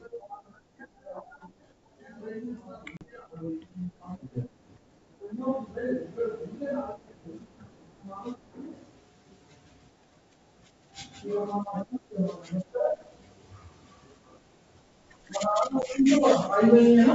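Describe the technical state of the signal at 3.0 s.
Packet loss on an ADPCM call strikes between 2.97 and 3.05 s. About 40 ms of audio, a few packets, went missing, and the decoder's predictor and step size fell out of step with the sender's. The result is a hard-edged silent hole, then sound returning slightly distorted.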